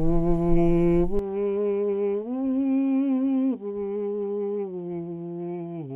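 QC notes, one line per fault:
1.19 to 5.96 s, input switched to a poorer device: with no gap at the change, the music turns dull and boxy, losing everything above 3.8 kHz, drops about 5 dB in level, and gains a faint new hiss sitting far beneath it. This points to the recording likely moving mid-take onto a lesser microphone or a headset's call-profile input, whose narrower band, different gain and own background noise replace the original device's sound for the rest of the clip.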